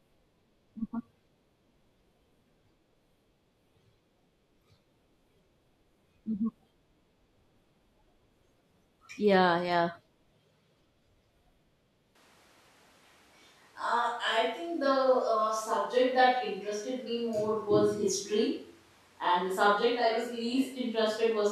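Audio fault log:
12.16 s to end, switch to a distant microphone: At 12.16 s the voice abruptly turns roomy and hollow and stays that way. Low end thins out, and the level drops by roughly 5 dB. A faint room noise floor rises, still far below the speech. The likely cause is that the close microphone dropped out and a farther one took over. That microphone hears more room reflection than direct sound, which costs warmth and adds ambience.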